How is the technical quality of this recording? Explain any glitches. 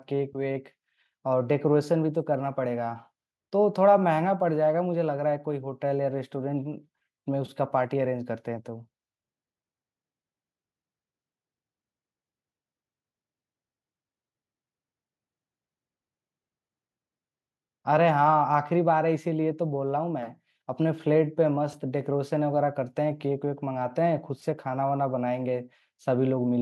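The recording has no glitches to explain. No technical faults can be heard anywhere in the speech.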